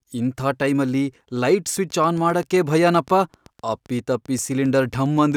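Interference from nearby equipment or a faulty connection is the likely source of a train of clicks from 1.77 s to 5.33 s. About thirty evenly spaced pulses at 7.6 per second, roughly as loud as the speech, tick steadily through talking and pauses alike.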